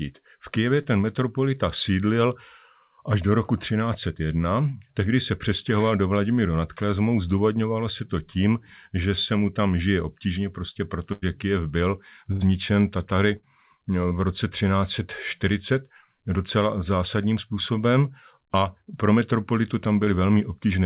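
At 0.82 to 0.86 s there is a short concealed packet loss. About 20 ms of the speech never arrived, and the receiver covered the hole with 24 ms of synthesized continuation of the preceding sound before blending back into the real signal. It is heard as a brief smear or wobble. The same fault recurs at 14.09 to 14.13 s, just before "v roce", and at 20.05 to 20.09 s, right after "způsobem a pro metropolitu", each time with about 20 ms lost and filled.

Between these, three bursts of packet loss occur close together. The first, at 11.12 to 11.24 s after "tam žije obtížně prostě", loses 100 ms and fills 95 ms. The next two are at 12.32 to 12.43 s (80 ms lost, 87 ms filled) and 13.37 to 13.45 s (60 ms lost and filled). In each, the concealment extends the last sound while attenuating it, giving a held buzz or fading hiss before the speech resumes with a stretch missing. All of this sits on a narrowband call path with nothing above 4 kHz, which fits G.711 A-law at 64 kbps.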